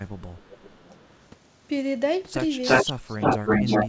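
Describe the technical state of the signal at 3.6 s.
Echo leak runs from 2.62 s to the end of the clip, so it covers 3.6 s. A delayed copy of the speech, trailing the original by about 338 ms, sits roughly 5 dB louder than the direct speech. This is likely a loudspeaker on the far end whose echo canceller let part of its microphone pickup through and sent it back. The speech is doubled, with the returned copy dominating.

Speech suppressed in double talk appears just before, from 3.5 to 3.55 s, a 50 ms dip of about 5 dB. The echo canceller was likely unable to separate the talker from the overlapping echo and attenuated both. It is heard as a brief sag in level, within audio that already carries no content above 8 kHz.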